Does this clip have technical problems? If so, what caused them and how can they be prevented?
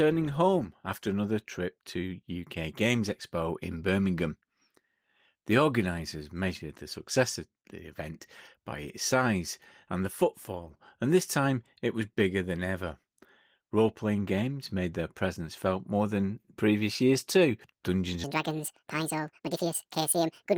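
Yes. From 18.24 s to the end at 20.57 s the speech plays back at 1.75 times its recorded speed, a section at the wrong speed, so it turns hurried and chipmunk-like, raised by roughly ten semitones. This is likely from that segment being resampled or clocked at the wrong rate. On a spectrogram the harmonics and formants jump upward and spread apart at 18.24 s, while syllables and pauses become visibly compressed in time on the waveform. Prevent it by confirming that every segment shares the project's sample rate and clock before editing or export.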